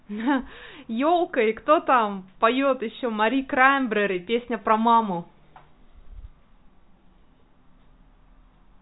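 No technical faults occur anywhere in this speech, which carries the narrow sound of G.711 telephone coding, with nothing above 3.9 kHz.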